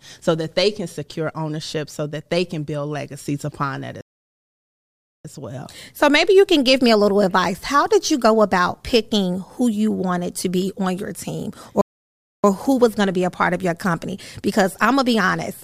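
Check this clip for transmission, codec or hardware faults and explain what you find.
Two playback stalls interrupt this speech clip. The first runs from 4.01 to 5.25 s, right after "build legacies upon that", a gap of about 1.24 s. The second runs from 11.81 to 12.44 s, after "be on your team" and before "who was going to", lasting about 0.62 s. Each time the sound cuts off mid-flow, goes fully silent, then resumes. The likely cause is the player running short of data or having its output thread blocked until it recovered. On a waveform each stall is a flat, empty stretch. On a spectrogram it is a blank vertical band with hard edges on both sides.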